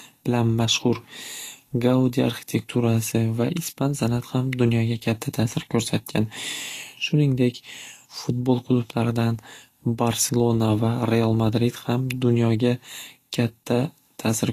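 Right through the speech there's grainy, hissy treble with nothing above 14.2 kHz, likely Vorbis compression at a low bitrate, something like 37 kbps, coarsely quantising the top end.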